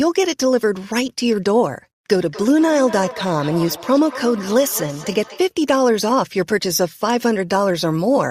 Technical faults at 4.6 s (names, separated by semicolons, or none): feedback echo between two devices